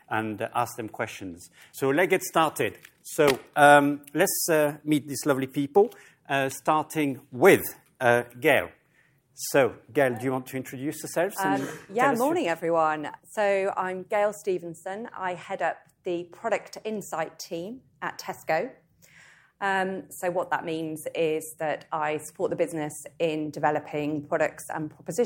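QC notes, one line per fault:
Nothing here needed flagging; the audio came through without any technical faults worth a line.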